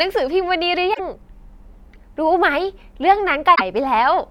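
A short glitch breaks into the speech at 0.90 to 1.00 s, and a second one follows at 3.52 to 3.61 s, each lasting about a tenth of a second. Both are damaged data in a compressed stream: bytes in those stretches of the encoded file were corrupted. The decoder either misread those frames or threw them out, lost its place in the stream, and made that brief blip while it searched for the next valid frame header.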